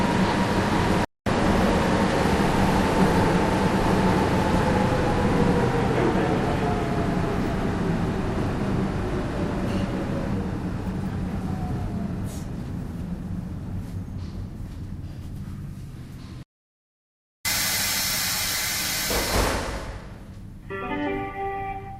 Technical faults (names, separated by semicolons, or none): playback stall; jitter buffer speed-up